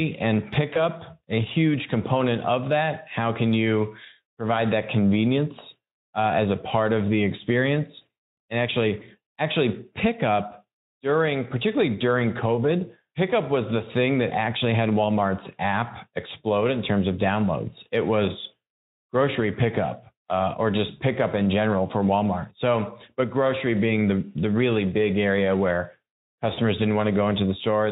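VoIP packet loss concealed by the speech codec occurs three times: the decoder, missing packets, rebuilds the gap from the preceding pitch and filter while fading the gain, so the sound smears into a brief buzzy, decaying tone. It happens at 0.73–0.82 s, just before "a huge component of", and at 8.99–9.04 s, just before "actually pickup during particularly"; each fits one lost 20 ms frame. At 26.53–26.59 s, right after "really big area where", it fits two lost frames, about 40 ms. The Speex coding carrying the speech, which sounds consistent with about 15 kbps, shows only light codec colouring.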